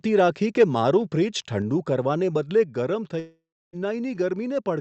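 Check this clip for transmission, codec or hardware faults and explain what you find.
Two kinds of fault are audible: two sudden level drops and one long gap near the end.

At 1.62 s the speech and the background noise fall together by about 3 dB. The same step happens again at 2.64 s. Both sources move at once, so the change happened before encoding. The likely cause is a microphone volume stepped down by the call software's automatic gain control. It lowers the device's input level in a single jump when the signal runs hot. Each step sounds like a sudden quieter patch rather than a fade.

From 3.19 s to 3.76 s there is a long network dropout, likely from a run of lost packets. About 0.54 s of audio never arrives. The receiver's concealment first stretches the last sound into a fading buzz. It then gives way to near silence for roughly 0.29 s. When the audio returns, that stretch is missing and is not replayed. 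The Opus call path at about 64 kbps is audible as a band limit, with nothing above 8 kHz, along with its usual coding noise.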